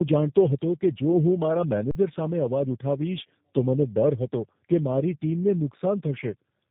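Throughout, the speech shows tandem speech coding. Three codecs in turn, ending with G.729A, each re-coded the last one's damage. It sounds rough and warbly, with nothing above 3.8 kHz.

From 1.91 to 1.95 s, an underrun with held sample occurs. The output stalls flat for 40 ms, losing about that much audio, then resumes.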